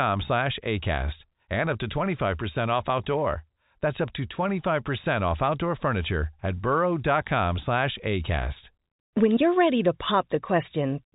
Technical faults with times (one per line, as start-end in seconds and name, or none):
none